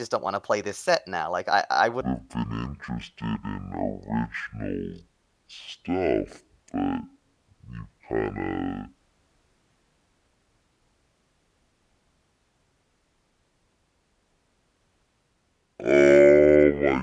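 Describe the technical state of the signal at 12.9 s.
At 12.9 s the wrong sample rate fault is in effect (2.01–17.02 s, after "I I"). Half-speed playback, consistent with 44.1 kHz material played near 22 kHz, drops pitch an octave and drags the speech. The spectrogram shows compressed harmonics and stretched syllables.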